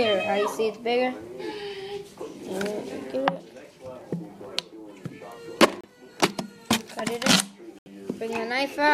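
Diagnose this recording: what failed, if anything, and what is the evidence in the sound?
Playback is where this one went wrong, and it looks like a Bluetooth stall. The sound drops to dead silence twice: about 29 ms at 5.81 s, then a longer 74 ms gap from 7.79 to 7.88 s, each time resuming cleanly rather than fading. That's the likely cause: radio interference delayed packets on the wireless link, the receiver's buffer emptied, and output simply paused until the retransmitted audio turned up.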